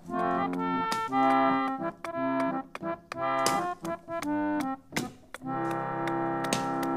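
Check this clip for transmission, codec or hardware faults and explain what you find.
The signal stays intact and continuous throughout, with nothing in it that points to a problem anywhere along its path.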